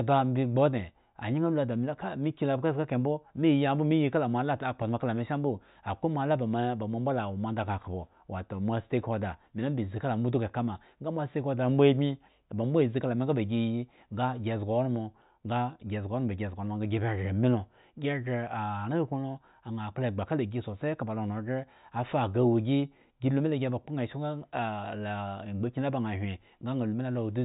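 No faults can be heard anywhere in the recording.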